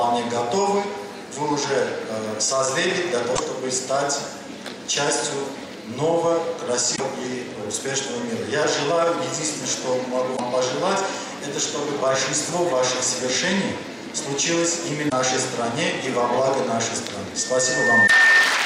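Damaged data in the compressed stream makes the decoder lose sync, producing brief glitches at 3.33, 6.93, 10.33, 15.06 and 18.04 s. From 17.36 s to 18.64 s, a microphone picking up its own loudspeaker causes a loudspeaker feedback squeal: a 1.8 kHz tone swells within about 0.7 s to sit well above the audio.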